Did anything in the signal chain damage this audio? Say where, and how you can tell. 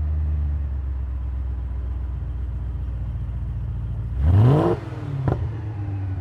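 No, nothing in the chain audibly damaged this audio, so no stage can be pointed to as the source of a fault.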